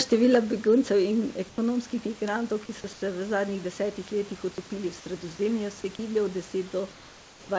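Speech recorded over a call path that passes nothing above 8 kHz, where discontinuous transmission likely cut in during pauses, so the receiver substituted comfort noise in place of the background. At 1.49–1.58 s, just before "migrantov ki so", at 2.93–3.02 s, between "migrantov ki so" and "v zadnjih desetih letih", and at 6.92–7.49 s, the real room noise gives way to a flat, featureless hiss about 2 to 3 dB quieter.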